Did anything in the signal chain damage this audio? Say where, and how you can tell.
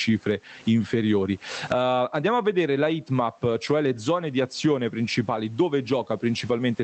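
Yes. Gain pumping runs throughout, with a gain swing of around 20 dB. This likely comes from microphone gain set far too high, with a fast limiter in call processing clamping every peak.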